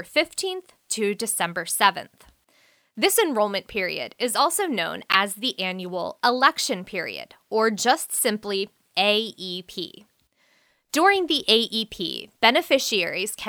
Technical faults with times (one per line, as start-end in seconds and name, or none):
5.12-5.15 corrupt frame decoded